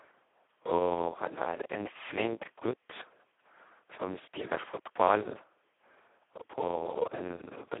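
From start to end the speech carries heavy Speex codec damage. The line is confined to roughly 300 Hz to 3.4 kHz, with nothing above 3.8 kHz, and the voice sounds hoarse, buzzy and robotic, which fits Speex running at its lowest setting, near 2 kbps. With so few bits for the excitation, the codec barely encodes the voice source. A simple telephone band-limit would sound muffled yet stay natural. Here the voicing itself is rebuilt, close to a vocoder.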